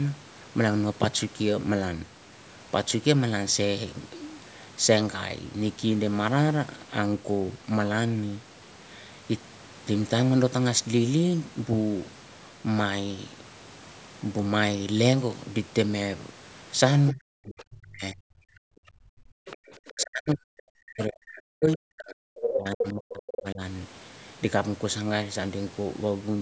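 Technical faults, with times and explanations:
17.12–18.24 s, 18.99–19.07 s and 19.88–23.61 s, speech suppressed in double talk: the speech sinks by up to about 40 dB, most of it about three seconds in the last stretch. This is likely the echo canceller mistaking overlapping talk for loudspeaker echo and turning everything down. The waveform envelope collapses or breaks into gaps, and the spectrogram thins to faint fragments.
18.52–18.71 s and 19.35–19.6 s, background gated by the echo canceller: the room sound drops by about 37 dB for a fifth of a second or less, then returns when the canceller releases the microphone. The waveform's noise floor vanishes abruptly, leaving a blank vertical band on the spectrogram.
19.46–20.04 s and 22.42–23.42 s, other side's voice leaking through: a second voice comes through, first faint at roughly 20 dB under the speech, later only about 5 dB below it. 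It is likely loudspeaker pickup the canceller failed to remove. On the spectrogram, a second set of harmonic stripes overlaps the main talker's.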